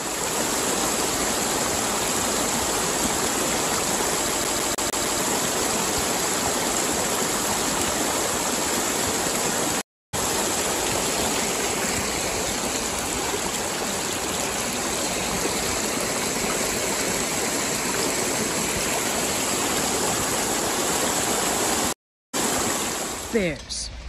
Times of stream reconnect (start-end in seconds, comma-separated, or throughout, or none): 9.81-10.15, 21.93-22.35